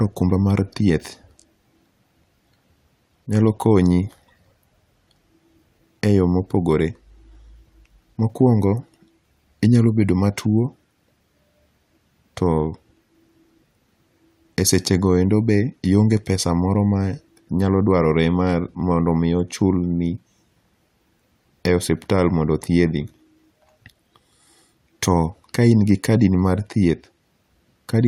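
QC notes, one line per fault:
No technical faults can be heard anywhere in the signal, so there is nothing to log.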